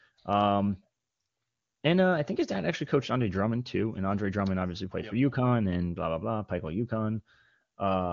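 No technical faults are audible in the speech; it has the wideband codec's usual ceiling at about 7.4 kHz and a clarity that fits AMR-WB at one of its higher rates.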